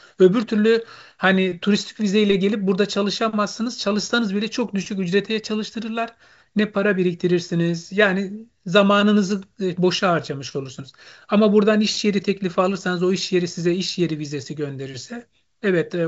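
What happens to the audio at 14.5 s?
At 14.5 s the speech is intact, carried by G.722 wideband telephone coding at 64 kbit/s with its usual band limit, nothing above about 7.7 kHz, and no dropout, click or distortion at that point.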